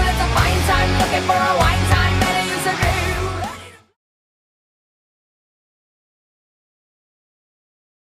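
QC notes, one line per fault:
No faults found; the level fades out smoothly from about 2.5 s to 3.98 s with no click or hard edge, as an editor would do it.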